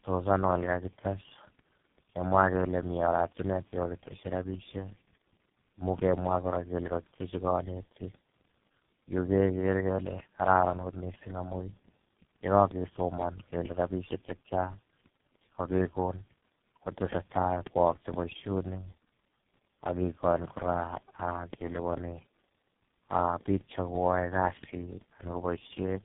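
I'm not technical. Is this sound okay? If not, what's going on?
No. From start to finish the speech sounds rough, muffled and warbly, with nothing above about 3.8 kHz, so the crisp edges of consonants are missing. This is tandem speech coding: the call passed through three separate mobile and internet-style speech compressors in a row, each one squeezing the already damaged output of the one before. The damage piles up, so it sounds worse than any single link would.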